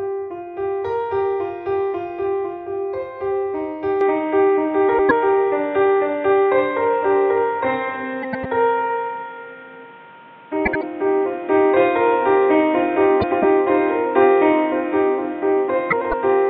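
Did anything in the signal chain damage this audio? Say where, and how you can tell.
Yes. An input switched to a poorer device at 4.01 s, at the capture stage. From there to the end, nothing sounds above 3.8 kHz, a new hiss sits well below the signal, and the level shifts by about 5 dB, with no gap at the change. This is likely a switch to a narrower-band microphone or headset.

Frames out of order, at the network or codec stage, occur at 4.88–5.11 s, 8.22–8.46 s, 10.65–10.83 s, 13.21–13.45 s and 15.90–16.14 s. In each, two neighbouring blocks of about 104.5 ms (78.4 ms at 10.65 s) play swapped. This fits runs of four frames, or three at 10.65 s. Each sounds like a garbled flutter, and no time is lost.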